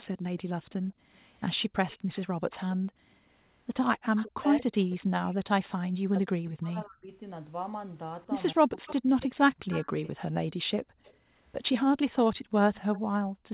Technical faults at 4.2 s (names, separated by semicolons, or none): speech suppressed in double talk; echo leak